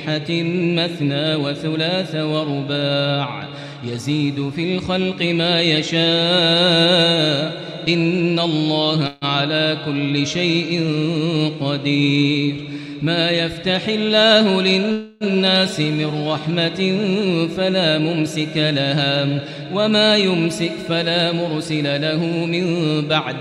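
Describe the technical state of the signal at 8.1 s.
At 8.1 s the signal is intact, with no dropout, distortion, glitch or other audible fault.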